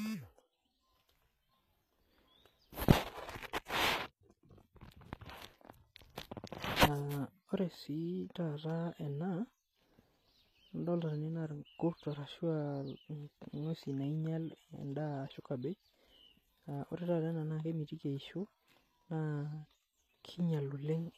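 From start to finish the speech has that plainly audible low-bitrate codec sheen, most likely HE-AAC compression at a rate that fits roughly 24 kbps. What sits in the treble sounds synthesized rather than captured. The upper bands are copied up from lower ones and shaped loosely, so harmonics don't line up across the crossover, and the s sounds come out gritty and metallic.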